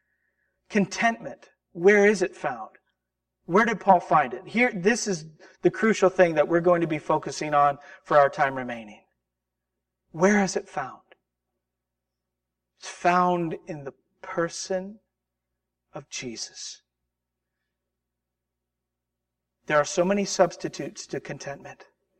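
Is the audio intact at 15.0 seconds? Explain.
No. At 15.0 seconds, as across the whole clip, the speech shows channel delay (comb filtering). One channel lags by about 5 ms, and summing to mono cancels evenly spaced frequencies from around 100 Hz upward, giving a hollow tone. Unlike flanging, these notches stay fixed rather than sweeping.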